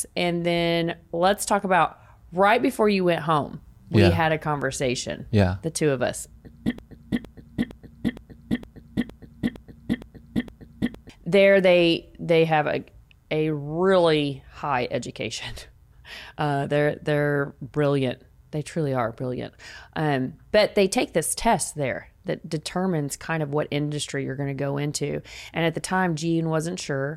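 From 6.79 s to 11.1 s the speech falls into a broken-record loop. One 0.46 s fragment repeats exactly nine times and the audio due then is lost, likely from a stalled stream resending its last fragment. The waveform and spectrogram show identical blocks tiled back to back.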